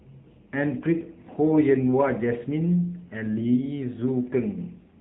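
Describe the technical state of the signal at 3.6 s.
AMR narrowband mobile codec at 3.6 s, present throughout: nothing above 3.8 kHz survives, and plainly audible buzzy, synthetic coding damage points to a low bitrate near 8 kbps.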